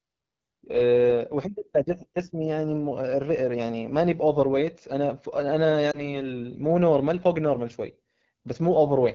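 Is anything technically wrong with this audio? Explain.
Yes. Two faults are audible in this speech clip.

The first runs throughout. The speech carries AMR wideband (HD Voice) codec damage, and it is plainly audible. The codec models the voice with a pulse-driven vocal tract filter up to 6.4 kHz and fakes the band above with shaped noise. At low rates the model's pulses and filter settings are coarse. The voice comes out rough and raspy. The level of roughness points to one of the lowest modes, around 8.85 kbit/s.

The second is a lost AMR speech frame, from about 5.92 s to 6.19 s. The dropout sounds like a single frame of 20 ms. A radio error corrupted that frame, and the decoder discarded it. It then rebuilt the gap by reusing the last good pitch and vocal tract settings at reduced gain. The result is a brief dip and warble in the voice. The voice then takes a moment to regain its strength.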